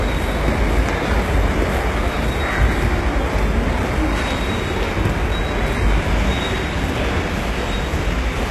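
From start to finish the treble is present but sounds synthetic and gritty, with plainly audible codec damage and nothing above 12.3 kHz. Unlike a plain low-pass, the top isn't dull: it is likely HE-AAC compression, rebuilding the treble from copied lower bands, which fits roughly 16 kbps.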